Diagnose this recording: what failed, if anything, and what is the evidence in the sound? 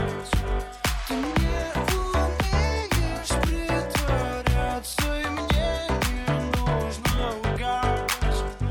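Nothing in the recording points to a failure at any stage of the chain. The sound holds together throughout, with no event that calls for a diagnosis.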